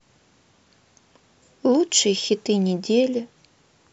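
No technical faults can be heard anywhere in the speech recording. Nothing needs placing on a timeline, since no event stands out at any point.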